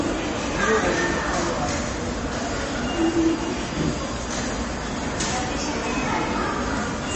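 From start to finish the audio sounds dull and plainly watery, with a swirling, unstable texture in the upper range and nothing at all above 8.3 kHz. This is MP3 compression damage, likely from encoding at a very low bitrate, with the sound pointing to roughly 30 kbps. Starved of bits, the encoder cuts the treble at a fixed point and drops weaker frequency detail, which flickers in and out from frame to frame.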